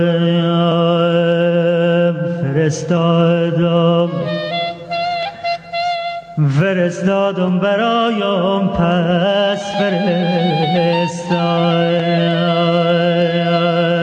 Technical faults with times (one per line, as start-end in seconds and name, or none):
0.00-14.03 gain pumping